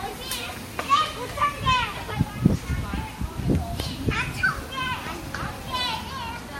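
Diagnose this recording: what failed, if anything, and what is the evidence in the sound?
The failure is at the codec stage, and it runs through the whole clip. Nothing is present above 16.1 kHz. Two different kinds of compression artefact are heard together, layered over each other from start to end. This is likely transcoding between lossy codecs. The sound fits an MP3 encode at around 58 kbit/s, then a re-encode to WMA 1 at around 64 kbit/s. The second codec spent its bits on the first codec's artefacts and added its own. The lower cut-off stayed.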